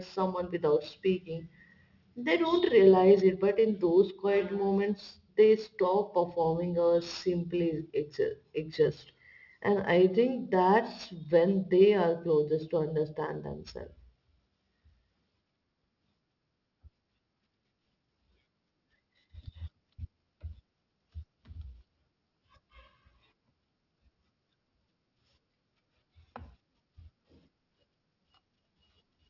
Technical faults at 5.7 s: aliasing

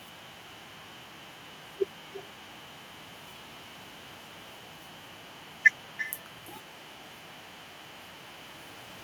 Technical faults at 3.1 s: echo with no canceller

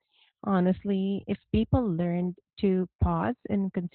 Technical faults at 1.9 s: Opus voice compression

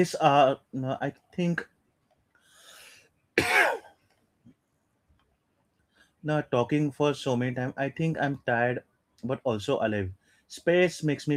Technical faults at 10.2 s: none

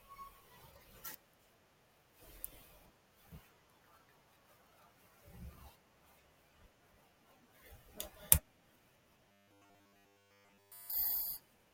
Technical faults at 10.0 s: robotic sound from repeated short buffers

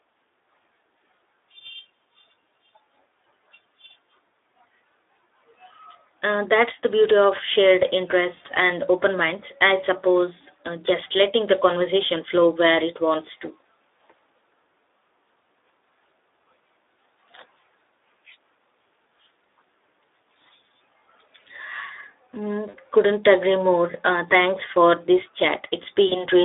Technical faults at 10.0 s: Speex codec

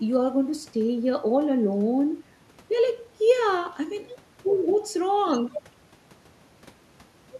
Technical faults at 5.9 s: none

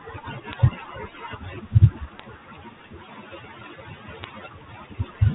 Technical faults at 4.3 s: bit errors on a digital phone line

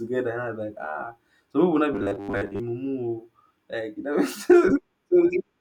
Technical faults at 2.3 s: robotic sound from repeated short buffers

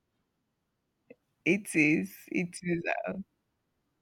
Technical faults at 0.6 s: none

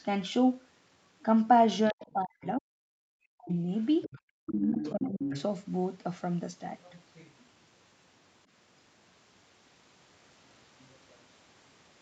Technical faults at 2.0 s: other side's voice leaking through; speech suppressed in double talk

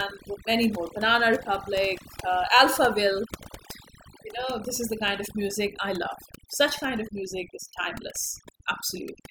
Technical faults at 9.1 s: overdone noise removal

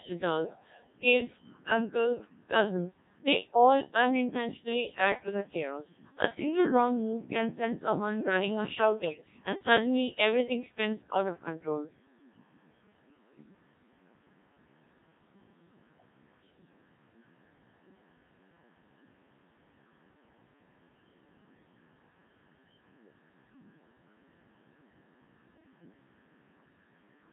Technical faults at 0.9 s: Codec 2 vocoder

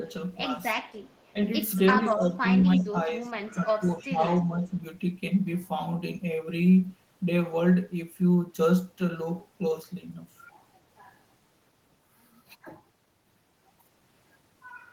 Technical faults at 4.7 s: speech suppressed in double talk

